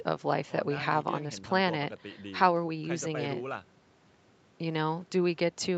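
Nothing here stands out as a fault: the speech comes through the call's microphone processing and the Opus call path just as expected, with the usual top end stopping at about 8 kHz.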